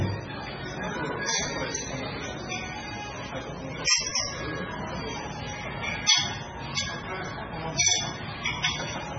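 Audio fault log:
Throughout, MP3 compression. Nothing is heard above 7.5 kHz, so the top end sounds dull and boxed in. The damage is heavy. Quiet detail flickers in and out, giving a watery, swirling texture, and sharp onsets blur. The likely cause is an MP3 encoder starved of bits, which fits a bitrate around 16 kbps. It cuts the treble at a fixed point and drops weak frequency lines from frame to frame.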